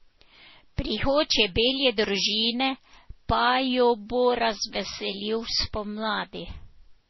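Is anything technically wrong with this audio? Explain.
Yes. Throughout the speech nothing is heard above 5.8 kHz, and the artefacts of different codecs are heard together. This is likely transcoding between lossy codecs, with low-bitrate MP3, then Vorbis, then MP3 again, each re-coding earlier artefacts, adding its own, and keeping the lowest cut-off.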